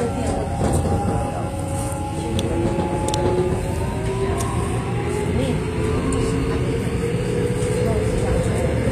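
A recording of sounds whose treble sounds gritty and metallic throughout, with nothing above 14.9 kHz. This is likely HE-AAC compression at a low bitrate, around 24 kbps: the upper band is rebuilt from copied lower bands rather than coded, so its detail doesn't match.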